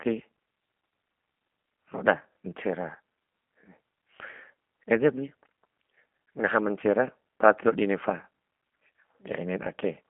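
From start to finish the speech carries the sound of the G.729 codec, the low-rate VoIP coder, and at this quality it points to the G.729A variant running at about 8 kbit/s. Each 10 ms frame is rebuilt from a vocal tract filter, a pitch predictor and a handful of pulses, so the voice comes out rough and a bit synthetic. The band is squeezed to roughly 200 Hz to 3.4 kHz, with nothing above 3.5 kHz, which leaves it thin and boxy.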